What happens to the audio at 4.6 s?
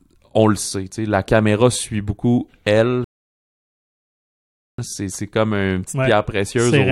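At 4.6 s you're in the middle of a rebuffering stall, from 3.04 to 4.78 s: playback ran dry and went silent, then picks the speech back up exactly where it stopped, adding about 1.74 s.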